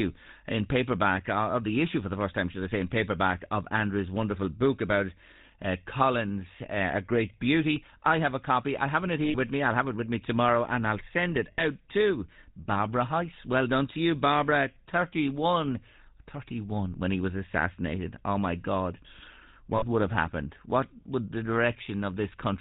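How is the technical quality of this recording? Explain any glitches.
The speech has been through a GSM full-rate codec for its whole length, and there are three short dropouts where coded frames went missing.

GSM full-rate codec: throughout, the voice has a buzzy, gravelly roughness and nothing above 4 kHz. At around 13 kbps, the codec models the vocal tract and excites it with a sparse, regularly spaced pulse train, so fine detail in the source is replaced by that coarse pulse pattern. The grit, together with the hard 4 kHz ceiling, sets it apart from simple telephone band-limiting, which dulls the sound without roughening it.

Lost GSM frames: at 9.24 to 9.36 s, between "copy I haven't it" and "with me I'll have", at 11.52 to 11.65 s, after "and I'll send it", and at 19.76 to 19.84 s, just before "would have happened", the sound turns into a rough, metallic ringing hold. The decoder reused the last good frame's settings. 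The first gap lasts about 100 ms and each of the other two about 60 ms, which fits runs of 20 ms frames. A dropout that plays silence or a click would sound different, and this ring is what distinguishes it from one.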